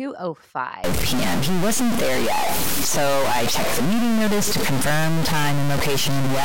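Speech clip with a stuck bit from 0.84 s to the end. The errors, around -15 dBFS, likely come from a fairly high bit stuck in the converter, giving buzzy distortion that also fills the pauses, unlike clipping.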